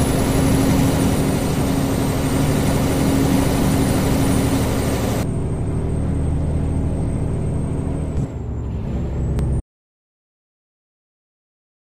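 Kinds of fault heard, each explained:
Damaged data in a compressed stream: a corrupted frame makes the decoder misread and resync, heard as a brief blip at 9.39 s, a broadband vertical smear on the spectrogram.
Audio dropout to silence: from 9.60 s to the end the sound cuts to silence, likely a lost input, a flat waveform line and blank spectrogram.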